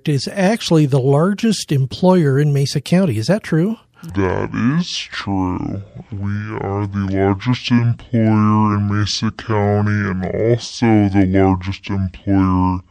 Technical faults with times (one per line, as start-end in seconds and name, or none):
4.10-12.91 section at the wrong speed